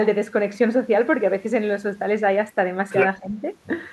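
At 2.9 to 3.06 s there's the other side's voice leaking through, about as loud as the talker, likely loudspeaker echo the canceller didn't fully remove. Then from 3.19 to 3.38 s the speech is suppressed in double talk, dropping by around 10 dB, likely because the canceller turned everything down while both sides overlapped.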